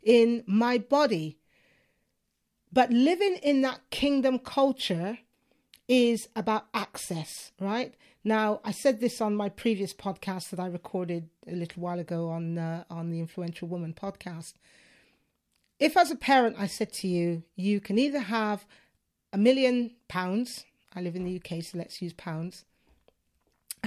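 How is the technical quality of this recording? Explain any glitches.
No technical faults are audible.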